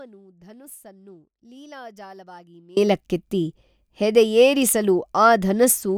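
From the very start until 2.77 s the speech is lost, leaving only faint sound roughly 25 dB down, then returns abruptly. This is an audio dropout to a faint residue, likely a signal break with the path after it still live.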